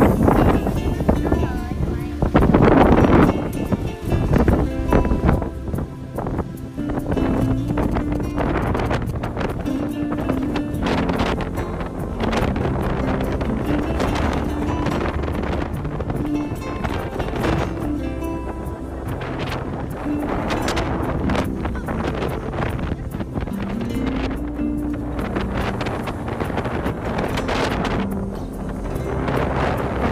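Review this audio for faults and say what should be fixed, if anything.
A galloping dit-dit-dit of short buzzes cuts in from 7.45 s to 9.26 s, sitting roughly 20 dB below the main sound. The buzz pitch is about 217 Hz, the pulse rate of a GSM transmitter, so these are GSM signalling bursts: a nearby 2G phone exchanging brief control bursts, which the audio circuitry rectifies into audible clicks and hum. To prevent it, keep phones switched off or in flight mode away from the recording chain.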